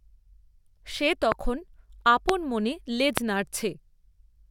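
Loud pops occur at 1.32 to 1.34 s, 2.29 to 2.31 s and 3.18 to 3.20 s, each a single sharp click lasting about 20 ms and standing roughly 20 to 25 dB above the speech, which continues underneath. The likely cause is a sudden voltage step or pulse entering the signal chain, from a plug, a switch, static discharge or a driver glitch, with the following circuitry shaping it into a brief pop.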